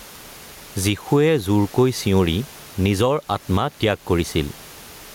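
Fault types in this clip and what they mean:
Gain pumping: The input gain is likely set far too high for the microphone, so a fast limiter keeps clamping down on every loud syllable and letting go in the pauses. Throughout the clip the level swings by roughly 10 dB. The room noise sits about 33 dB below the speech. The speech comes out squashed, with loud and soft parts pressed close together.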